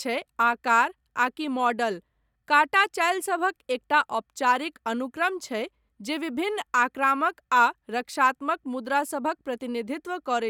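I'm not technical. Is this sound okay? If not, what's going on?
Yes, nothing here sounds wrong to me.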